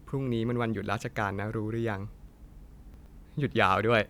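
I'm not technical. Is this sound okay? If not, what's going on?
No. Chunks out of order, from 2.94 to 3.06 s: one 60 ms piece of the speech arrived a step late and played after the piece that should follow it. Nothing is missing, but that brief moment sounds jumbled.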